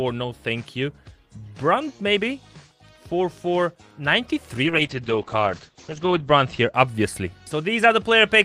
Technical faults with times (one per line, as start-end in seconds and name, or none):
4.67-6.79 call bitrate drop